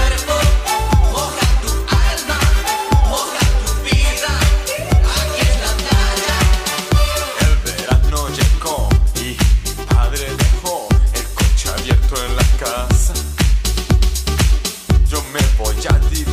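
No technical faults can be heard in the recording.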